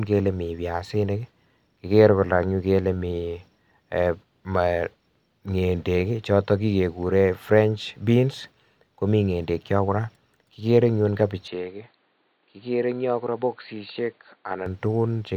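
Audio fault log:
11.48 to 14.66 s, input switched to a poorer device: the sound suddenly goes dull and boxy, with nothing above 4.6 kHz, a drop of roughly 5 dB in level, and a faint new noise floor sitting well below the signal, around 45 dB down. There's no gap at the changeover. It then opens back up just before the end. That likely comes from the recording jumping to a narrower-band mic or headset profile partway through.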